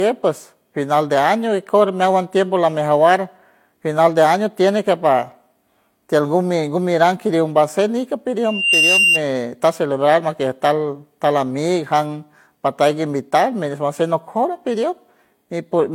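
Throughout the speech, the signal has likely passed through two lossy codecs in turn, a transcoding between lossy codecs. The artefacts fit a low-rate HE-AAC stage followed by Vorbis at a modest rate. The second encoder spent bits re-coding the first one's smearing and added its own, so two different kinds of swirly, watery texture sit on top of each other. The very top of the spectrum is missing, with nothing above 16.6 kHz.

From 8.44 to 9.22 s, a loudspeaker feedback squeal appears. A microphone picked up the loudspeaker it was feeding, and at 2.8 kHz the loop's gain exceeded one. That frequency reinforced itself on each pass, growing over roughly a third of a second into a piercing whistle that rises to a few decibels above the speech before it stops.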